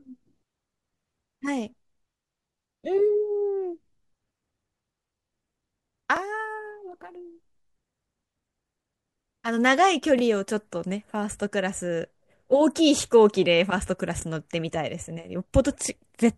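Speech processed in overlapping 4-second chunks, each starting about 25 ms early, replays a brief slice at the joins: stutters at 6.17–6.19, 10.19–10.22 and 14.22–14.24 s.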